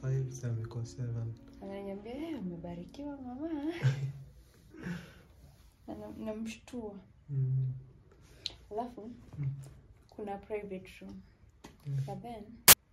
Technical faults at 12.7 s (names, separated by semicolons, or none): file tags played as audio